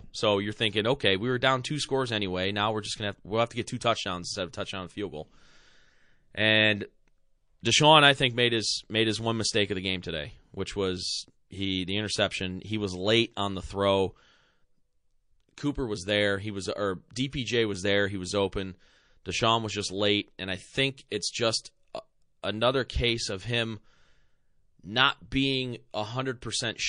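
Across the whole speech recording there's plainly audible MP3 compression, with a watery, swirly edge. That's likely an encoder starved of bits, which fits a low bitrate of around 40 kbps, cutting the top end and dropping weak detail frame by frame.

Pre-echo shows up at 17.30 s, right after "was or" and before "was there": a hiss creeps in about 24 ms ahead of the attack, roughly 11 dB above the surrounding quiet. It's worse at 21.08 s, between "late and I think" and "it's just a another", with about 34 ms of hiss rising about 19 dB. The noise is being smeared across long blocks, around 52 ms, because the encoder never switches to short ones for sharp onsets.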